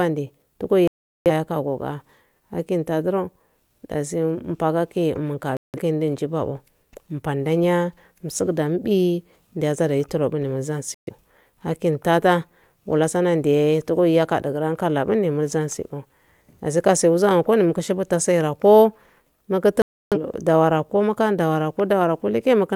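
The speech drops to silence four times, at 0.88 to 1.30 s, 5.57 to 5.80 s, 10.95 to 11.13 s and 19.82 to 20.17 s, then resumes further on. These are digital broadcast dropouts: the receiver muted when it lost the signal or frames failed their check, discarding that audio.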